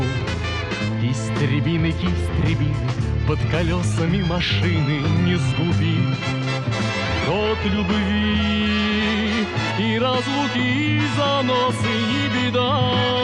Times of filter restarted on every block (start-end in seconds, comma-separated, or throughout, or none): none